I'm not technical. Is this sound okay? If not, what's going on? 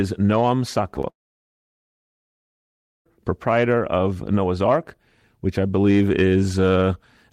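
No. Twice, around 0.95 to 0.98 s and 1.02 to 1.05 s, tiny bits of the call arrived late (short concealed packet loss), so the receiver patched them, leaving brief smears. Then, from 1.10 to 3.15 s, a long network dropout likely cut the connection: the audio goes silent for nearly two seconds and returns at "proprietor of", with that stretch lost.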